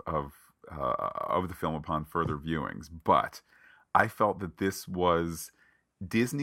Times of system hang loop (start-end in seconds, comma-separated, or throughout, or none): none